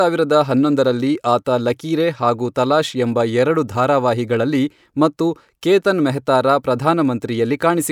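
No technical faults can be heard anywhere here.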